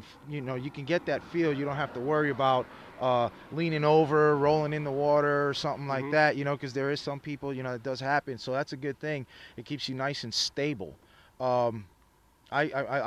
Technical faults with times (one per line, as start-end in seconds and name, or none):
none